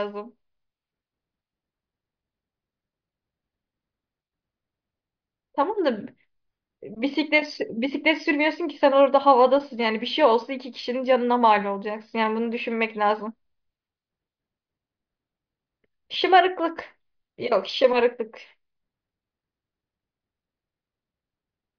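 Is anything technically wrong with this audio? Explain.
No, nothing technically wrong can be heard anywhere in this speech recording.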